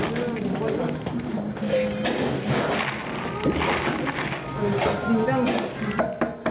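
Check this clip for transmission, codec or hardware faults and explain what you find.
One fault runs through the whole clip: gain pumping. The input gain is likely set far too high, so a fast limiter keeps clamping down on every loud sound. The gain swings by about 20 dB, leaving the sound squashed and breathing. The call path's G.711 A-law coding stops everything above 4 kHz, which explains the narrow, telephone-like top end.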